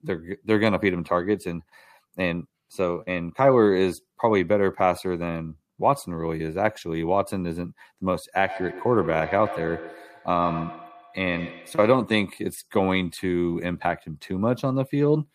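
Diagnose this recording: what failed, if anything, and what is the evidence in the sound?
Call processing failed: feedback echo between two devices, from 8.44 to 12.24 s. Speech returns roughly every 150 ms, peaking about 13 dB below the direct sound. On a spectrogram, fainter, thinner copies of each syllable trail at that spacing. Each device's canceller ignores the other's loudspeaker.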